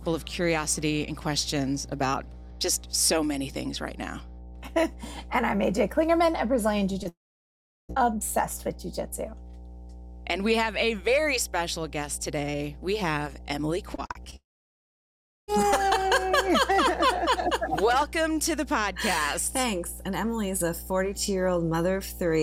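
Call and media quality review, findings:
Mains hum, throughout. Steady 60 Hz tone with low harmonics, about 15 dB below the signal. Probable ground loop or nearby transformer coupling line frequency into the analogue capture path before encoding. Constant level.

Short concealed packet loss, 7.03–7.07 s. Brief smear lasting about 20 ms. Jitter buffer/decoder PLC extended the preceding sound for about 14 ms, then crossfaded back into received audio.

Long network dropout, 7.09–7.91 s. Roughly 0.8 s lost, directly after the previous fault. Concealment buzz fades quickly, then about 0.73 s of silence. Playback resumes later in the stream with the gap content absent.

Long network dropout, 14.36–15.50 s. About 1.1 s lost, roughly 1.04 s heard as silence after a fading concealment tail. Likely a transport-level outage, with the receiver starved and PLC giving out.

Repeated packet loss (robotic sound), 13.95–14.34 s. 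Choppy texture with pieces missing. Five separate gaps, longest about 39 ms, with about a third of the span synthesised by PLC. Back-to-back concealment during a burst of lost or late packets, leading straight into the second dropout.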